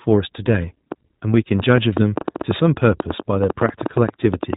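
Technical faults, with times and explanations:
Throughout: iLBC codec. The speech has passed through a narrowband VoIP coder that handles each 20 ms frame independently, at a rate that fits 15.2 kbps. Everything above 4 kHz is gone, leaving the speech dull and band-limited, with a plainly audible rough, synthetic edge.
0.92 to 4.54 s: train of clicks. Short pulses of much the same shape ride over the speech and the pauses, about 30 of them at an uneven 6.6 per second and peaking roughly 15 dB above the signal. They are likely caused by interference from nearby equipment or a faulty connection or power supply.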